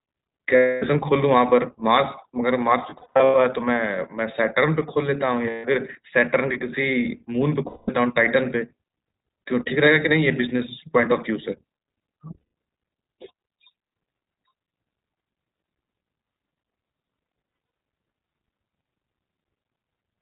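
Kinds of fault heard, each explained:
iLBC codec: speech sounds muffled, slightly rough and synthetic, with nothing above 4 kHz, as this narrowband VoIP codec codes each frame's excitation independently.
lost iLBC frames: six spots with held, buzzy vowel-like gaps, each losing 140 to 280 ms of audio in total, where the decoder repeated the last pitch cycle with noise over dropped packets.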